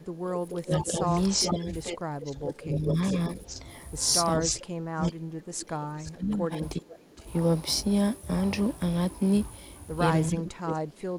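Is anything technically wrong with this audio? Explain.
Yes, two kinds of fault recur in this speech. Speech suppressed in double talk occurs from 0.0 to 3.65 s, 4.37 to 7.25 s and 10.31 s to the end. The speech dips by up to about 15, 30 and 25 dB respectively, likely because an echo canceller confused it with loudspeaker echo. Unlike echo, this removes sound rather than adding it.

Echo leak appears from 0.49 to 3.56 s, 4.4 to 5.11 s, 5.98 to 6.11 s and 7.17 to 7.25 s. A copy of the speech returns about 0.44 to 0.45 s late, fading from about −5 dB to about −35 dB. This is likely residual loudspeaker pickup the canceller missed, and the fixed delay distinguishes it from room reverberation.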